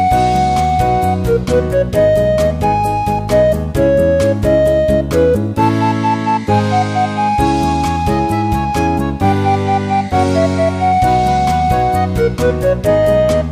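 Nothing is technically wrong with the audio in this clip.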